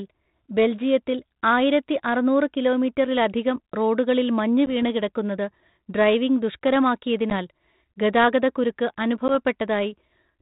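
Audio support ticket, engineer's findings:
Packet loss on an ADPCM call, three dropouts at 4.66 s, 7.30 s and 9.28 s. Each is a hard-edged 10 ms hole, consistent with one lost packet, then slight distortion settling within tens of ms. Component: G.726 decoder, predictor and step size out of step with sender after concealment. Waveform: flat silent gap with abrupt edges. Spectrogram: thin blank vertical stripe. Band-limited below 4 kHz throughout, consistent with 32 kbit/s G.726.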